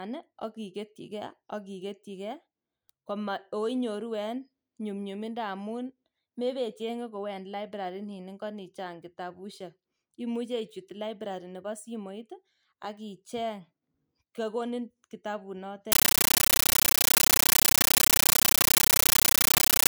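Compressed stream played as audio from 15.92 s to the end: the speech gives way to very loud, chattering static. Undecoded frames pass as raw samples, each a 13.3 ms noise burst and silent padding, repeating 31.25 times a second, which fits a 640 kbps AC-3 stream.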